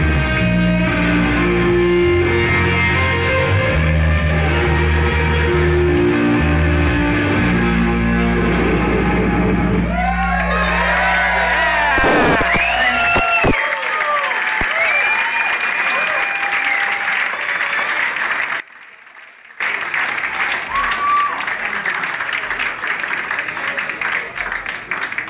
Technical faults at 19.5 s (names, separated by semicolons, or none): one channel inverted